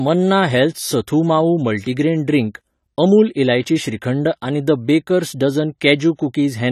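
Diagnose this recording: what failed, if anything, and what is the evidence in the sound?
The speech sounds dull and smeared from start to finish, with a fizzy, warbling edge on sibilants and nothing above 14 kHz. The cause is likely AAC compression at the codec stage: AAC-LC at a low bitrate, consistent with roughly 32 kbps, lowering its cut-off and coarsely quantising the frequency lines.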